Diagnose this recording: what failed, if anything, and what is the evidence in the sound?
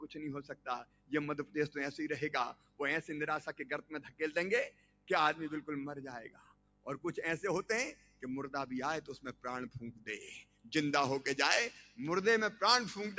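The failure is in call processing: a noise suppressor meant for speech was left on and applied to this non-speech sound. It treats steady content and decays as noise, so the level swings by about 15 dB. On a spectrogram, sustained bands fade in and out, with the band-limited call path showing nothing above 8 kHz.

The suppressor cut this sound at 0.03–1.55 s, 2.53–2.80 s, 3.46–5.10 s, 6.26–6.87 s, 7.93–8.23 s, 9.33–10.72 s and 11.75–11.99 s, with the deepest drops between about 13 and 17 dB. On the waveform, onsets stay intact while the envelope sags and tails are shortened.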